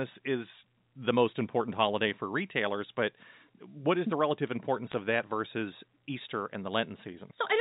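From 4.91 to 4.94 s, between "is the relative importance" and "of that versus", there is a short burst of bit errors on a digital phone line. A few bits in the G.711 stream were flipped, at a rate of roughly two in a thousand. Each flip corrupts one sample. Where a sign bit or high bit is hit, that sample jumps sharply. The result is a brief crackle of sharp ticks over the speech. The span fits a couple of frames. The 4 kHz telephone band stays the same throughout.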